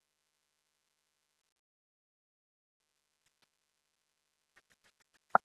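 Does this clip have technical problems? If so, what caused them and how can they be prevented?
Yes. Three problems can be heard.

Noise suppressor artifacts run through the whole clip. The room noise sits about 12 dB below the speech, and the suppressor pulls it down by about 20 dB in the pauses but lets it rise again under the talking. The background therefore pumps in step with the speech. The room noise itself stays a steady bed, so this breathing comes from the processing. Prevention: lower the suppression strength or reduce the room noise at the source so less processing is needed.

Repeated packet loss (robotic sound) occurs from 1.41 to 1.59 s. Four short gaps, none longer than 30 ms, are patched by stretching the preceding sound, and about a third of that stretch is concealed. It sounds choppy, but sound keeps coming through between the holes. That separates it from the dropout that follows, where nothing arrives at all. 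Prevention: use a steadier connection and a larger jitter buffer so late packets still arrive in time.

From 1.59 to 2.81 s, about 1.2 s of audio is gone. Apart from a very brief concealment tail, this stretch is silence, and the sound resumes afterwards with that portion missing. The likely cause is a long network dropout. It differs from the packet loss just before it because there is no choppy fill here, only a clean hole. Prevention: fix the unstable link, for example by moving from Wi-Fi to a wired connection.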